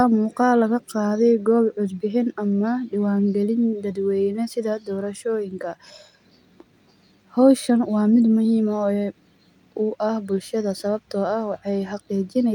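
Nothing in this speech recording stands out as a technical fault, so there's nothing here to flag.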